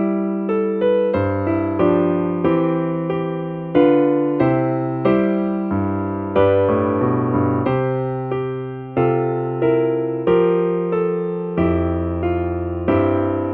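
No technical faults can be heard anywhere in the audio, and the signal holds steady with nothing breaking into or disturbing it at any point.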